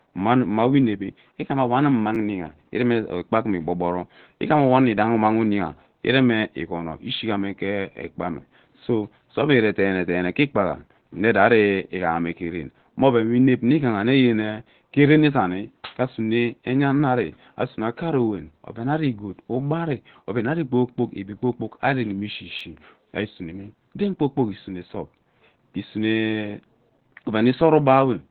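Throughout, the speech sounds muffled and hoarse, with nothing above 4.4 kHz. This points to heavy Opus compression, likely in its narrowband SILK speech mode near 12 kb/s, which gives roughness rather than MP3-style swirling. At 2.15 s, and again at 22.59 s just before "ari isuneme den kpoo", a repeated buffer replays an 11.6 ms slice once, which fits a 512-sample buffer. Each repeat is a brief buzzy click with a hard join, not the silent gap a dropout leaves.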